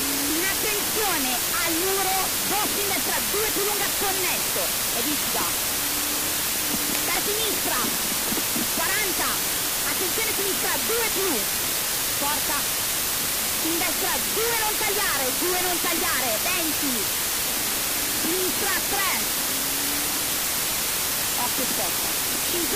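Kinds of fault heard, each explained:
Low bit depth with dither: The audio is held to about 3 bits, with dither added before rounding, so the coarse rounding error becomes a steady, even white hiss instead of distortion. It runs throughout, at roughly 10 dB above the signal.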